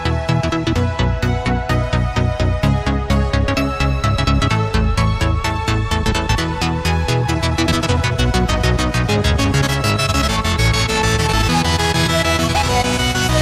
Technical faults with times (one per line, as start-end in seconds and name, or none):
7.20-13.41 time-stretched section